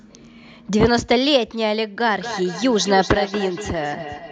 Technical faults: feedback echo between two devices

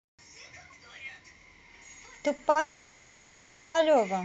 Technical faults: short stall from a late packet; call audio freeze

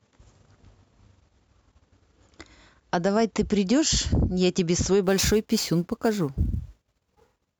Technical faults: sample clock jitter

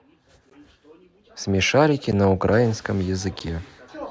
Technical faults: block of digital silence

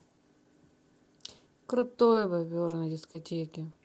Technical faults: scattered short gaps; short concealed packet loss

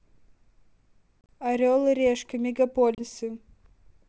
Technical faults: packet loss on an ADPCM call

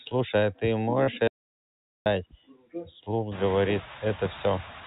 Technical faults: noise suppressor artifacts; audio dropout to silence; speech cut by the noise suppressor

